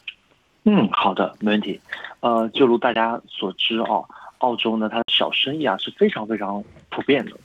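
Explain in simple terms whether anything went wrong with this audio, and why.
Bluetooth dropout, likely, at 0.95 s, 2.94 s (about 15 ms each) and 5.02 s (58 ms): late-arriving sound was discarded, leaving brief silent holes.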